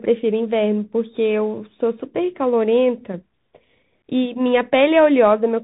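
Bluetooth CVSD headset codec damage runs throughout the speech. Each sample is coded as a single up-or-down bit with an adapting step, which fits a 64 kbps link. Nothing passes above about 3.8 kHz, s sounds turn scratchy, loud high sounds distort, and granular hiss sits underneath.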